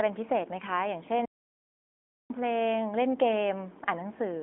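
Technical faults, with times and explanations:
1.26 to 2.30 s, audio dropout to silence: the speech cuts off abruptly, leaving about 1.04 s of silence with no room tone, then resumes mid-flow. The likely cause is a lost input signal, with the recorder writing silence until it returned.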